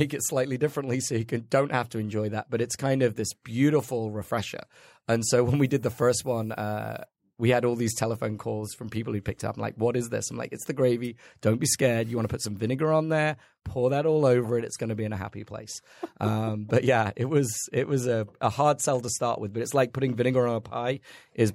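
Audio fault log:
5.55–7.05 s, low bit depth with noise shaping: for this stretch of the speech a steady, thin hiss appears, sitting roughly 30 dB below the signal and growing sharply brighter toward the top of the band, then clears just before "we had all these". The coarseness fits a 9-bit signal. Its rounding error has been fed back and filtered so the noise is pushed up into the high frequencies instead of spreading evenly, which leaves that bright, hissy tilt.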